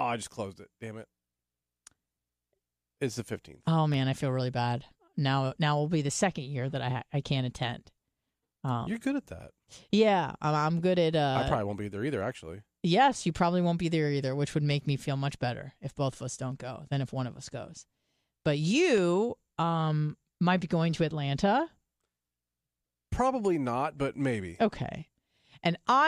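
Sharp single clicks occur at 3.94 s, just before "I feel really bad", at 16.82 s, between "both of us don't" and "than if one of", and at 18.98 s, before "um might be going". These are likely dropped samples. A fraction of a millisecond goes missing, so the waveform jumps abruptly.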